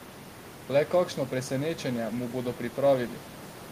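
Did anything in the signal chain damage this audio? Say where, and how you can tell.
No, nothing in the signal chain damaged this speech; the only thing beneath it is the room's own background noise, sitting about 19 dB below the voice, which belongs to the recording space rather than to any stage of the chain.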